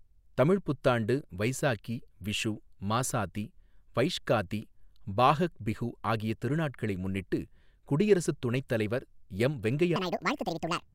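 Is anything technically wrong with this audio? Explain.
Yes. From 9.96 s to the end, a section at the wrong speed runs 1.8 times too fast. Speed and pitch jump up together. The speech turns hurried and high, roughly ten semitones up. The likely cause is playback or editing against the wrong clock.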